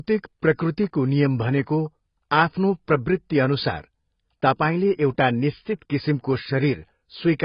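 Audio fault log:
Throughout: AAC compression. The speech is dull and smeared, with nothing above about 5.1 kHz and a warbling, fizzy texture on sustained sounds and sibilants. The damage is heavy, which fits AAC-LC at around 16 kbps, likely a low-bitrate encode. At that rate the encoder lowers its cut-off and quantises each frame's frequency lines so coarsely that bands drop out or are filled with substitute noise, which leaves the speech both muffled and unsteady in texture.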